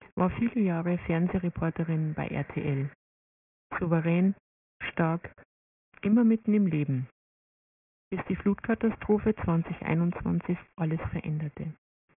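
Aliasing runs through the whole clip. The sample rate was cut without an anti-aliasing filter, and the band edge at 3 kHz points to a rate of about 6 kHz. Everything that was above 3 kHz folds back down as spurious, unrelated tones sitting roughly 20 dB under the wanted sound. High-frequency detail turns gritty and metallic, and the spectrum stays dense right up to the 3 kHz ceiling instead of tapering off.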